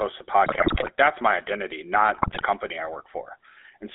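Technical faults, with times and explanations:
throughout: GSM full-rate codec. The whole clip has that gravelly, buzzy roughness you get when the vocal tract is modelled by a filter and driven by a regularly spaced pulse train that keeps only every third excitation sample. The damage is plainly audible, the sound sits in a narrow 300 Hz to 3.5 kHz band, and the texture fits the old 13 kbps full-rate codec.
0.46–0.89 s and 2.14–2.43 s: GSM bit errors. The first burst runs right up to "that's my identity", and the second kicks in just after it. Through both stretches the sound breaks into squawks, pops and gargling, because corrupted filter, pitch and gain values bend the spectrum or spike the level frame by frame. The second burst has a heavier error rate, something like 7% against roughly 4% in the first.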